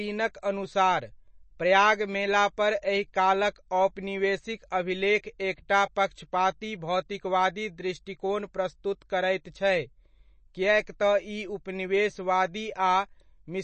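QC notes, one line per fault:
Throughout: MP3 compression. The speech sounds watery and swirly, with metallic chirps on s sounds, smeared consonant attacks, and nothing at all above 8.3 kHz. The likely cause is a low-bitrate MP3 encode, which fits about 32 kbps. Starved of bits, the encoder chops the treble at a fixed point and zeroes quieter frequency lines, which flicker on and off from frame to frame and leave the plainly audible warbling texture.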